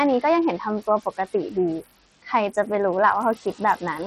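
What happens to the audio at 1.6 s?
At 1.6 s, as across the whole clip, a noise suppressor is pulling down each frequency band it judges to be steady noise, frame by frame, cutting the room noise by about 17 dB. The background dips and swells around the speech.

At the same moment the signal has heavy coding damage. Nothing survives above 16.2 kHz, the treble flickers, and a gritty, aliased grain rides on the speech. The likely cause is Bluetooth SBC compression, starving the top sub-bands of bits in a way that points to a low bitrate of around 64 kbps.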